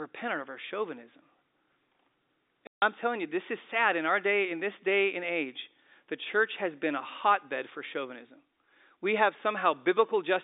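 At 2.67 s there's packet loss filled with silence: 150 ms drops out with hard edges, likely about five packets, right before "telling you this is".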